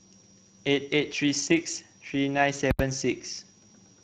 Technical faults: switching supply whistle; Speex codec; invalid numbers at full scale

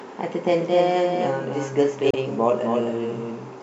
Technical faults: doubled audio track; damaged data in a compressed stream

